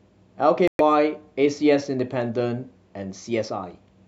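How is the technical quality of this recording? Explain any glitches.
The recording has one glitch, a short hole in the speech. From 0.68 to 0.81 s the audio cuts to silence for about 0.12 s, then comes back. This is most likely a Bluetooth dropout: a few audio packets, fitting roughly five lost frames, did not arrive in time and were discarded, so the output simply went quiet. What separates it from a stall or buffer underrun is that the speech resumes further along, as if it had kept playing through the gap, rather than picking up where it stopped.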